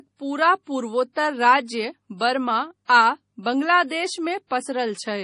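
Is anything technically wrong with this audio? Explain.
Yes. Two faults are audible in this speech clip.

Heavy MP3 compression runs throughout. Nothing is heard above 10.6 kHz, and the sound has a watery, swirling quality with metallic chirps on s sounds. This is likely lossy MP3 encoding, at a rate consistent with about 32 kbps. With so few bits, the encoder removes everything above a fixed treble cutoff and discards quieter frequency components. Those components flicker in and out between frames, which produces the swirl.

Pre-echo appears from 1.13 to 1.16 s. A hiss lasting about 35 ms comes just before a sharp attack, and that attack sounds softened and smeared. The codec spreads its quantisation error evenly across a transform block. Because this onset sits late in its block, noise sized for the loud attack also fills the quiet moment before it, so the hiss is heard ahead of the attack.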